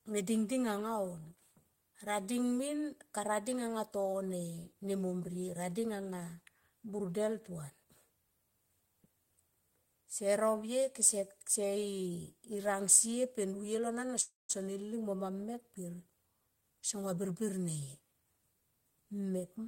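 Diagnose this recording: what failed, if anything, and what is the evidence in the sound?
A short stall from a late packet occurs at 14.07 to 14.11 s, at the network and jitter buffer stage. The sound is held for an extra 16 ms with a slight buzz or dip. The buffer ran dry, the receiver stretched the last speech sound, and playback resumed where it had stopped.

A call audio freeze follows at 14.21 to 14.51 s. The last sound continues as a fading buzz or hiss and then about 180 ms of silence, 282 ms in all, before speech resumes. The likely cause is packets held up in the network, emptying the jitter buffer.

A jitter buffer speed-up runs from 16.33 to 18.35 s. The speech plays at 110% speed with the pitch unchanged and sounds hurried. To shed the built-up delay, the receiver cut out short pitch-period pieces, about a fifth of a second in total.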